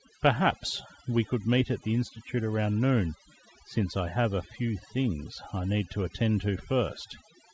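From start to finish, the background between phrases drops to an unnatural near-silence dotted with twinkling, chirpy specks, and the softer parts of the voice are hollowed out. This is overdone noise removal: the reduction was set too aggressively, so any frequency band close to its noise estimate was pushed far down or shut off, taking quiet speech detail along with the noise. The audio also carries nothing above 8 kHz, which fits a wideband call codec.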